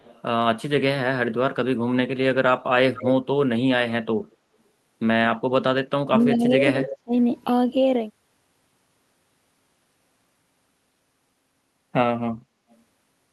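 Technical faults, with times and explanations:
0.0–0.22, 2.94–3.08, 4.31–4.36, 6.21–6.25, 6.89–6.94 and 12.7–12.78 s, echo leak: faint to fairly clear scraps of the voice return about 220–240 ms late, likely a far-end loudspeaker echo the canceller missed.
6.08–7.13 s, speech suppressed in double talk: the voice dips by up to about 30 dB in pieces, likely because the echo canceller mistook overlapping talk for echo.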